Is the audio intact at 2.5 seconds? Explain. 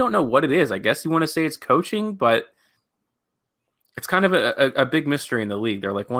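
Yes, the speech at 2.5 seconds is intact, with nothing at that moment beyond the light coloration of the Opus voice compression running normally at about 24 kbps.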